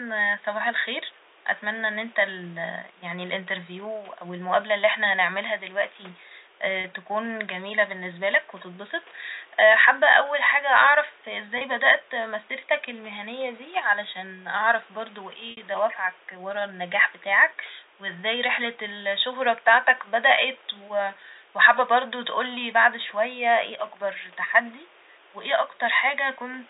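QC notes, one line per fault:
6.81–6.84 s, packet loss with pitch repetition: a slightly held, buzzy tone just before "تكون جميلة باللنسبالك وتتبسط". About 30 ms of audio went missing, fitting a single lost packet, and the last pitch period was looped to fill it.
11.58–11.61 s, packet loss with pitch repetition: the same brief buzzy hold right before "بدأت مسيرتك المهنية دي". A 30 ms gap was bridged by repeating one pitch cycle.
15.51–15.57 s, packet loss with pitch repetition: a longer held buzz that fades toward silence just after "دي علشان أعرف برضه", then a short cross-fade back in. The 60 ms gap points to two lost packets.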